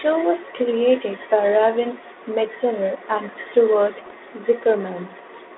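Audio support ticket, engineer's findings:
Bit errors on an ADPCM link, 4.06 to 4.13 s: pops and rough burst with brief level jumps. Flipped bits upset decoder step size and predictor, so errors ring on briefly. Bit error rate roughly 0.4 percent. G.726 path at 32 kbit/s, band limited to about 250 Hz to 3.5 kHz, light coding roughness only.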